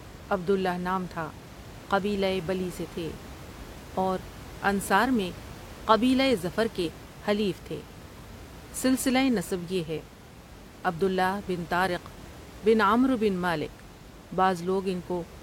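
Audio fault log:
No faults are heard in this speech clip. Room noise sits in the background at about 18 dB below the speech, as part of the recording itself.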